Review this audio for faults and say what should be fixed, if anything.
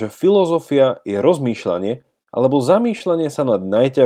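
At 2.23 to 2.29 s there's a short stall from a late packet: the jitter buffer ran dry, so the speech got stretched about 42 ms, nothing lost. A slightly deeper jitter buffer or smoother network timing should keep that from happening.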